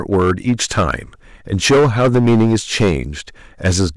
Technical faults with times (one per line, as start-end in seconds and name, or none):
0.00-3.96 hard clipping